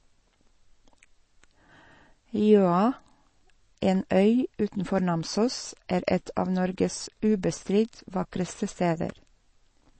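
A starved encoder is the likely cause here: the speech has almost certainly been through MP3 compression at a low bitrate, consistent with about 32 kbps, and the damage is plainly audible for the whole recording. With so few bits, the encoder has thrown away everything above about 8.3 kHz, so sibilants lose their crisp top and sound dull. The weak frequency lines it keeps flicker in and out between frames, giving the speech a watery, swirling texture throughout.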